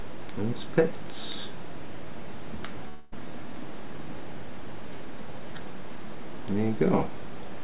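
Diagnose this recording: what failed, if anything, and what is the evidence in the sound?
A long network dropout is the likely cause of the break from 2.88 to 3.14 s. About 0.24 s of audio is missing, and the receiver fills the gap by extending the last sound as a fading buzz or hiss rather than silence. The call audio, band-limited to 4 kHz by G.711, then resumes without the lost part.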